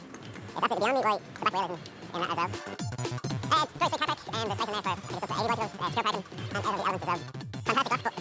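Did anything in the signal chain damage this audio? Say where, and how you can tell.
Yes, a wrong sample rate at playback throughout. Everything runs at double speed, a full octave high. That fits 8 kHz material played back at 16 kHz without conversion.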